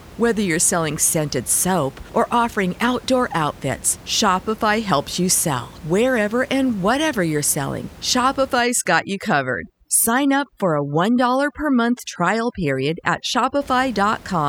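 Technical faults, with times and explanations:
8.6 to 13.61 s, overdone noise removal: the suppressor clamps bands near its noise estimate, so room noise about 22 dB down becomes twinkling near-silence and quiet parts of the speech are removed with it.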